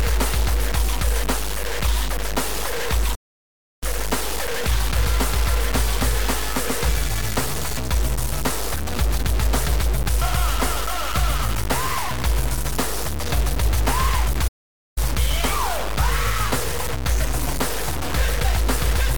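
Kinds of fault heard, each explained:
Low bit depth without dither, throughout: the audio is coarse and grainy all the way through, with an error barely quieter than the sound itself, about 10 dB down, which fits a signal held in only about 3 bits. The likely cause is values truncated to so few steps with no dither, so the distortion tracks the sound, turning quiet passages gritty and letting the faintest parts sputter or drop out between steps.
Playback stall, 3.14 to 3.83 s and 14.47 to 14.98 s: the audio stops dead mid-flow, first for about 0.67 s and then for about 0.49 s, before carrying on. Silences this abrupt point to the player running out of data or having its processing blocked, and it likely could not feed the output until it recovered. The first gap is noticeably longer, and each cuts straight into ongoing sound.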